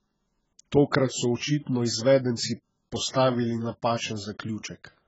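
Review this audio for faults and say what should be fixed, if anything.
The speech has most likely passed through AAC compression at a very low rate, with the heavy damage pointing to AAC-LC at around 12 kbps. Starved of bits, the encoder discards everything above 7.7 kHz and quantises the remaining bands coarsely, so the whole clip sounds dull and smeared, with a warbling, fizzy texture on sustained sounds and sibilants. To prevent it, encode at a substantially higher bitrate or deliver the file uncompressed.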